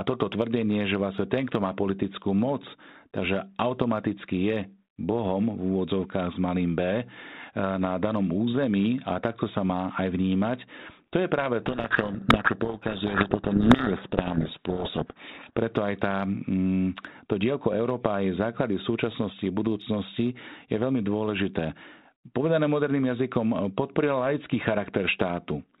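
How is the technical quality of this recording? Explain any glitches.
One serious glitch stands out. The recording is speech carried as band-limited telephone audio, with the light coding hiss that fits G.726 ADPCM at 32 kbit/s, and from 11.62 to 15.59 s it breaks down badly.

Codec payload misread, 11.62 to 15.59 s, starting right after "je práve": the receiver unpacks each G.726 code word with its bits in the wrong order. The decoder still gets plausible-looking values, but they are the wrong differences, so its adaptive prediction drifts away from the real signal. The speech is buried under harsh, grinding distortion until the two ends agree on the bit order again at 15.59 s.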